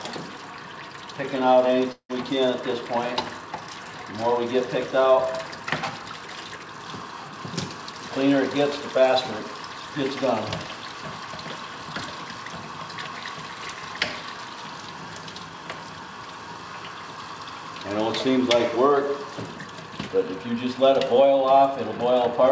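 Around 1.92 s the sound breaks up until about 2.11 s, and the likely cause is a long network dropout. The last bit of audio gets stretched into a fading buzzy fill for roughly 170 ms, sinking to near silence for around 90 ms, and when things resume about 180 ms of material has simply gone missing. Through the G.722 call path the band tops out at 8 kHz, so the fill sounds dull.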